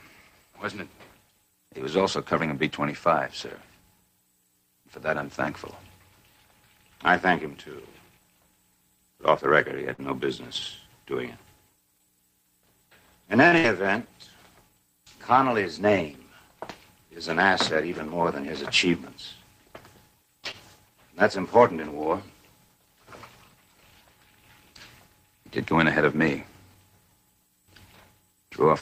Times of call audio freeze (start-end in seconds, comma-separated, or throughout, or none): none